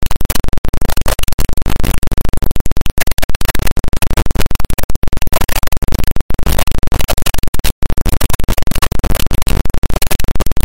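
Integer read as float, throughout: 32-bit integer samples are decoded as 32-bit floats, so values swing between near-zero and the clipping limit, giving a harsh, loud square-wave buzz that drops out in quiet moments.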